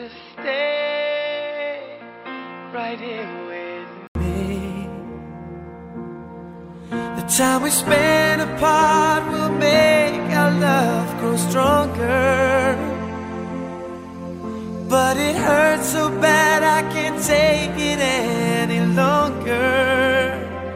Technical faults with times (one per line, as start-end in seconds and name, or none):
0.00-4.15 input switched to a poorer device